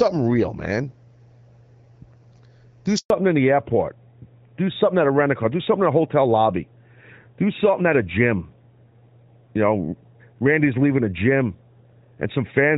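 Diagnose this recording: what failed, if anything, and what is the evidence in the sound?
The speech drops out abruptly at 2.98 s and stays silent for 120 ms, picking up again at 3.10 s. This is a network-stage handover gap: the call switched between networks and no speech frames arrived during the switch, so that stretch is lost.

From 3.10 s to the end, the speech sounds duller and rougher, with nothing above 4 kHz. This is a codec-stage fallback to narrowband. Before it, light HD Voice coding fits AMR-WB near 12.65 kbit/s; afterwards the band limit points to AMR-NB around 12.2 kbit/s.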